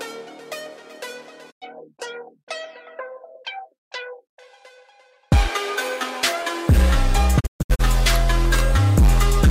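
Digital broadcast dropout silences the sound at 1.50–1.64 s, then in scattered holes across 7.39–7.81 s. Quick 20 ms fades, not clicks, show receiver muting.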